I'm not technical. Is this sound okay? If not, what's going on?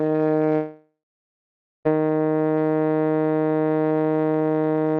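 No. From 0.55 s to 1.87 s the music breaks off, which points to a long network dropout as the likely cause. The last sound is stretched into a fading buzz, then about 0.9 s of near silence follows. When the music returns, roughly 1.3 s of it is simply gone. A short glitch would be a brief click or stutter. Here the gap is long, and the music doesn't pick up where it left off.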